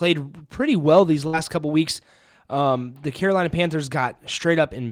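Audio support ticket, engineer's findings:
Burst of packet loss, 1.27–1.36 s, between "pretty well these" and "couple weeks". Receiver concealment stretches the last sound about 56 ms, fading as it goes. About 60 ms of speech is then skipped and playback resumes past the gap. Probable component: network path feeding the receiver's jitter buffer. Consecutive packets were lost or arrived too late to play.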